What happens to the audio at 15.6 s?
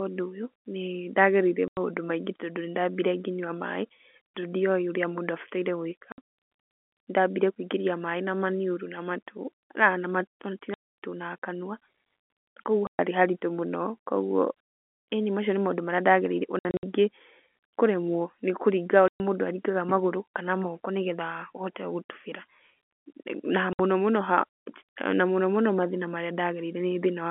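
Nothing goes wrong at 15.6 s: the speech carries on intact through the narrow telephone band it has throughout.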